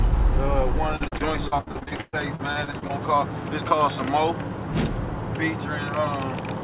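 From 0.96 to 2.91 s the audio breaks up with repeated packet loss, giving a robotic sound. About twenty holes fall in under two seconds, the longest near 118 ms. Each one is patched by stretching the last good sound forward, so roughly a third of the span is synthetic fill. The result is choppy, with pieces dropping out. Throughout, nothing sits above 4 kHz, which fits a narrowband G.711 call path.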